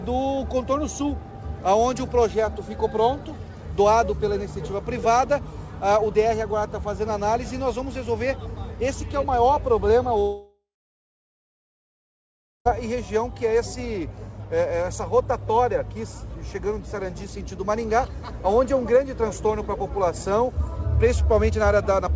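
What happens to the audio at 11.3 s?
A likely long network dropout stops audio arriving from 10.20 to 12.67 s. The last sound fades out as a buzz or hiss into silence, and the missing stretch is never played.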